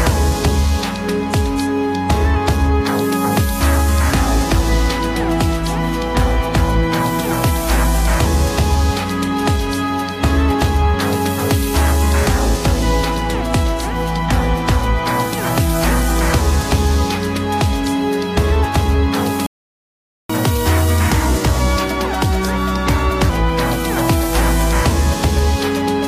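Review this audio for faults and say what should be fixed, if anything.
Playback stall, 19.46 to 20.30 s: the sound cuts out in mid-flow for about 0.83 s of silence, then resumes. The player was likely starved of data or had its output thread blocked, leaving nothing to send to the device until it recovered.

Catch-up at higher speed, 20.30 to 23.30 s: right after the gap, the sound runs 1.15 times faster and about two semitones higher for three seconds, then settles back. The player is resampling its backlog to recover the time lost during the stall.

To prevent both, give the player a deeper buffer and keep its audio thread from being blocked, so it never runs dry and has no backlog to rush through afterwards.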